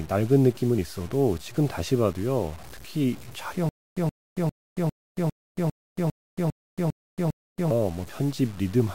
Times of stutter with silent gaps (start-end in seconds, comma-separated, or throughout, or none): 3.69-7.71